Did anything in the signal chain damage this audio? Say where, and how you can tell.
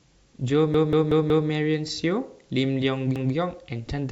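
Yes. At the driver or buffer stage, audio arrived late and the device replayed its last buffer, a repeated buffer fault. A 186 ms chunk of speech stutters with hard joins, played four extra times from 0.74 to 1.49 s and once more at 3.16 to 3.34 s. That length fits an 8192-sample buffer.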